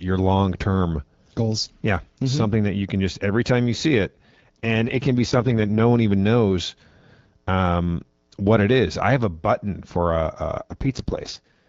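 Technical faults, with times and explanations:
4.04–5.80 s and 10.57–11.68 s, AMR rate drop: after "every time you see" until "one even knows", and again after "have a button for" to the end, the speech turns rougher and more synthetic, which fits the codec stepping down from 12.65 to 6.6 kbit/s. On a spectrogram the band edge holds and there's no gap in the waveform, but the harmonics smear into noise.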